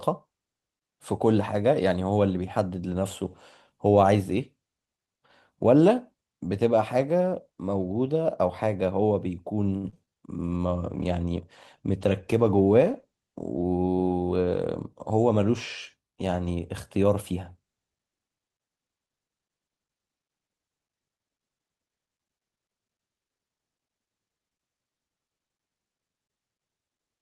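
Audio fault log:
9.77–10.09 s, repeated packet loss (robotic sound): four gaps land in quick succession, the longest about 61 ms. Each one gets patched by stretching the last bit of sound, so over a third of this stretch is filler and it comes out choppy.
10.10–10.38 s, jitter buffer slow-down: right after those losses the receiver pads its reserve by repeating tiny slices of sound, adding about 40 ms. Playback drops to 89% speed at the same pitch, so this bit sounds dragged out.
10.35–14.75 s, call bitrate drop: the bandwidth estimate dips and the encoder goes from 32 to 16 kbps, staying at the low rate for about 4.4 s. With half the bits the coding gets coarser, so the sound turns rougher and duller until it recovers.
13.20–13.79 s, jitter buffer speed-up: now there's too much audio queued, so the receiver snips out short pitch-period pieces, around 70 ms in total. Playback runs at 112% speed with the pitch unchanged, which makes this stretch sound hurried.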